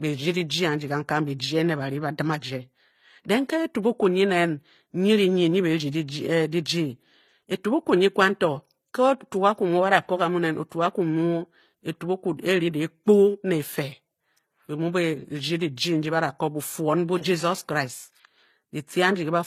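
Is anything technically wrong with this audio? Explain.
Yes. Throughout the speech, nothing sounds above 14.9 kHz, and two layers of codec smearing and swirl sit together. This is likely transcoding between lossy codecs: an MP3 pass near 53 kbit/s, then HE-AAC near 24 kbit/s spending bits re-encoding the earlier artefacts while adding its own.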